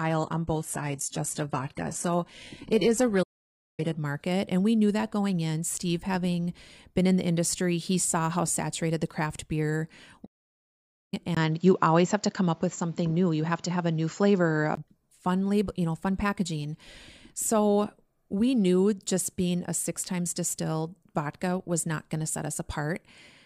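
From 0 to 4.0 s the speech is thin and smeared, with a synthetic top end. This is an adaptive stream starting at a low bitrate. It suggests a low-rate opening version before the player switched to a better one. At 4.0 s the quality jumps up with no gap.

From 3.23 to 3.80 s the audio cuts out for about 550 ms, then resumes. This is a playback stall. The player likely ran short of data.

After "saturated the craft beer" comes a second stall, from 10.25 to 11.14 s. The silence lasts about 870 ms, with the same likely cause.

At 11.35 s, just before "fun label you know", there is a 20 ms dropout. Then the sound turns dull and boxy. The level shifts by around 5 dB, and a noise floor appears roughly 40 dB down. This is an input switched to a poorer device, likely a headset or a weaker microphone. It lasts until 14.77 s.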